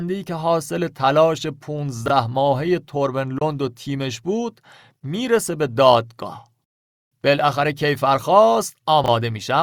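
At 2.06 to 2.10 s there's a short jumbled blip. That's chunks out of order: two 20 ms pieces got swapped, so the later one plays first and the earlier one comes in a beat behind it. Nothing goes missing, but the speech loses its order for a moment. The same thing happens again at 9.04 to 9.08 s, with the same 20 ms chunks and the same one-chunk slip.

Between those, at 3.38 to 3.42 s, the sound cuts to silence for about 23 ms. When it comes back, it has skipped ahead as if it had kept playing through the gap. That pattern is most likely a Bluetooth dropout, where the data for the headphones didn't arrive in time and was thrown away. A hole this short fits a single lost packet.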